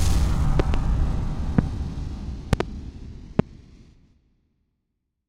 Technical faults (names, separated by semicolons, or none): loud pop